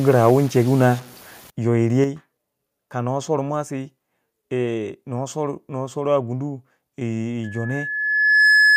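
Speech clip. Low bit depth without dither, 0.0 to 1.5 s: the quiet parts sound gritty and grainy, likely from truncation to about 7 bits, leaving coarse distortion that tracks the sound. Microphone overload, 0.27 to 0.31 s: a loud peak goes about 1 dB past the converter's limit and its tops are flattened into a harsh, crackly edge, likely from too much input gain. Microphone volume stepped down at 1.02 s and again at 2.04 s: voice and background drop abruptly by about 5 dB each time, likely the call software cutting the input level after the overload. Loudspeaker feedback squeal, 7.44 s to the end at 8.76 s: a 1.7 kHz tone swells over roughly a second to about 10 dB above the speech, as the loop between loudspeaker and microphone exceeds unity gain at that frequency.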